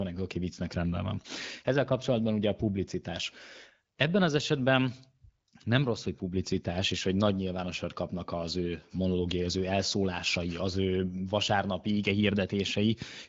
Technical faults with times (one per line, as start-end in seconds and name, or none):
none